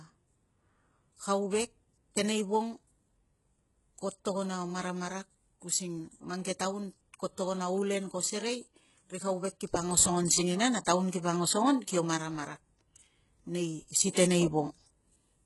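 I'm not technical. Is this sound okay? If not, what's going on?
No. Throughout, the speech shows HE-AAC compression, likely from heavy squeezing: the top treble, above 11.5 kHz, is gone, and the rebuilt highs make s sounds gritty.

Pre-echo appears at 10.85 s and again from 14.10 to 14.14 s: a short hiss leaks just before a sharp sound, blurring its start.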